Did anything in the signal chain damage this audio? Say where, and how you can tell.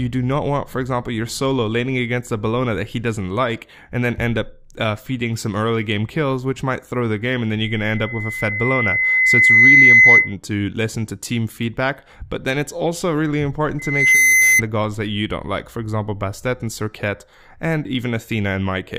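Yes. Loudspeaker feedback squeal in the analogue microphone-to-loudspeaker loop: a 2 kHz tone swells over about two seconds (7.63–10.35 s) to about 15 dB above the sound, then again within half a second (13.79–14.62 s). Loop gain exceeded one there. A steady interfering tone wouldn't build up like this.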